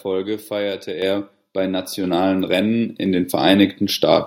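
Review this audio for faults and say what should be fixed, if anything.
The microphone volume stepped up twice: at 1.02 s the level jumps by about 6 dB, and at 2.04 s by about 4 dB more. Each time the call software judged the input too quiet and raised the device's input volume in a single step. The speech and the background noise rise together at the same instant, which tells this apart from a talker simply speaking louder or a compressor riding the gain smoothly. Disabling automatic microphone level adjustment in the call software would prevent it.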